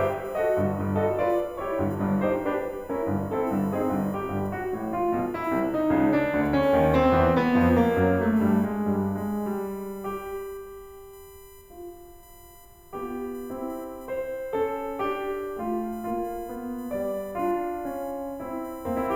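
Throughout the music runs a USB whine: current drawn in 1 ms bus frames leaks through power or ground, producing a fixed-pitch 1 kHz tone and harmonics, strongest at 12 kHz, roughly 30 dB below the music. A spectrogram shows steady horizontal lines at 1 kHz multiples, brightest at 12 kHz.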